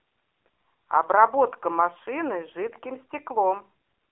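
From start to finish the speech has that AMR narrowband mobile codec sound. It's been squeezed down to a phone line: thin on the bottom below about 300 Hz, and nothing at all above about 3.6 kHz, so the air and sibilance are gone. The codec damage is heavy, giving the voice a buzzy, synthetic edge as the vocal-tract model and its sparse pulse excitation run short of bits, which fits one of the lower AMR-NB modes, around 6.7 kbps.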